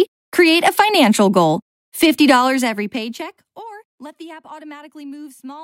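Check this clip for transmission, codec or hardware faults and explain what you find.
One fault stands out: zipper noise between 2.35 and 3.65 s, while the level drops by roughly 25 dB. Instead of gliding down, the gain is stepped in coarse chunks, around forty times a second, with no smoothing between them. Every step puts a tiny discontinuity into the waveform, so you get a fast ticking, zipping texture riding on the sound for the whole fade.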